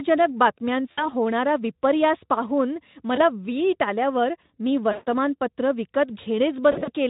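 At 0.91 to 1.09 s, before "होणारा विपर्यास पाहून", VoIP packet loss concealed by the speech codec stretches the speech into a fading buzzy tone or coloured noise for about 60 ms. The Speex decoder extrapolates pitch and filter, lowering gain. Repeats follow at 3.15 s (20 ms), at 4.91 to 5.07 s after "वीट आल्यावर मी" (140 ms), and at 6.71 to 6.91 s (scattered, longest 60 ms).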